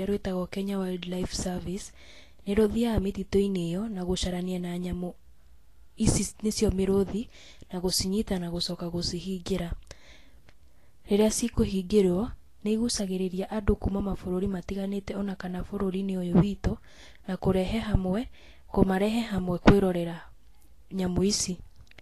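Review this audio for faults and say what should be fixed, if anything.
Throughout, the speech's treble is hissy and grainy and stops at 14.2 kHz, likely Vorbis compression; a simple low-pass would leave the remaining treble clean rather than noisy. Encode at a higher Vorbis quality setting, or keep a lossless master.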